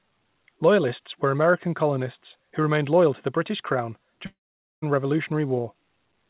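At 4.26 s the speech turns into a fading buzz, then drops to near-silence for about 0.47 s. It resumes at 4.84 s, with roughly half a second missing. This is likely a long network dropout, with the receiver stretching the last sound before giving up.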